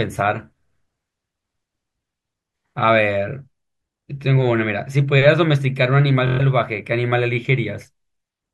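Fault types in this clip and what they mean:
Bluetooth stutter: From 6.27 to 6.40 s the wireless link failed to deliver audio in time, so the receiver kept replaying its last short slice of speech until fresh data arrived. That produces a brief machine-gun buzz, about 116 ms long, consistent with roughly five lost packets of around 23 ms each. The speech then picks up later, as though it had kept playing. On a waveform this shows as identical short segments tiled end to end. A spectrogram shows a run of repeated vertical blocks.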